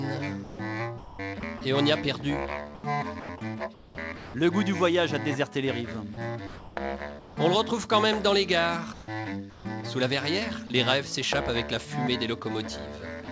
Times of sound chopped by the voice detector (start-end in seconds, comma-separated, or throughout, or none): 0.44-1.61, 2.75-4.34